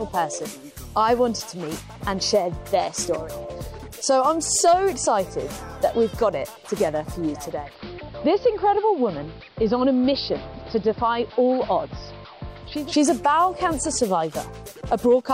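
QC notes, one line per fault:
7.30–12.96 s, digital radio blending to analogue: the receiver lost its digital stream and cross-faded over about 470 ms to the station's AM broadcast. The treble narrows, the level drops about 1 dB, and hiss sits roughly 30 dB down. Unlike a plain filter or dropout, the hiss and dulling arrive and leave as gradual blends.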